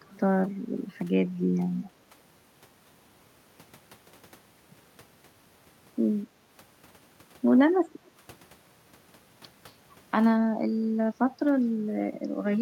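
Echo leak appears from 0.05 to 0.19 s and again from 1.84 to 1.89 s: a faint copy of the speech trailing it by 230 ms, about 30 dB below the speech in the first instance and quieter still, about 35 dB down, in the second. The likely cause is a far end playing the call on a loudspeaker whose echo canceller let part of the microphone pickup through and returned it as a short delayed ghost.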